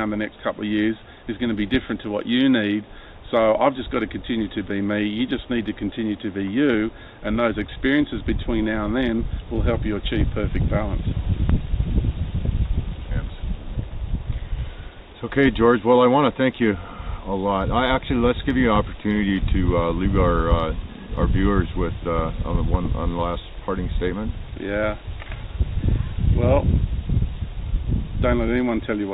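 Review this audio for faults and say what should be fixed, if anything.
No faults can be heard anywhere in the audio. Nothing needs to be fixed.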